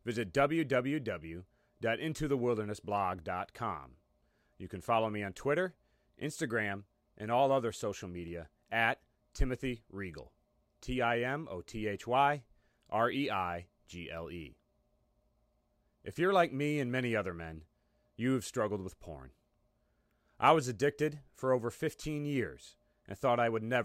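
At 8.28 s and 16.87 s, single sharp clicks in the speech point to likely dropped samples: a fraction of a millisecond is missing, so the waveform jumps abruptly.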